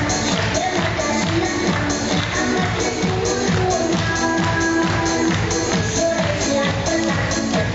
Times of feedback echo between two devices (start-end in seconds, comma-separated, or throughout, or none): none